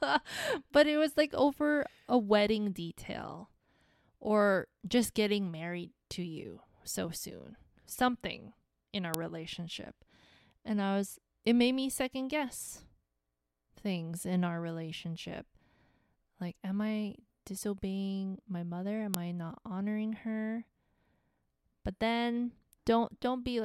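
A sharp, loud click snaps through the speech at 9.14 s and again at 19.14 s: file header played as audio, where header bytes from 10-second pieces were joined in as samples.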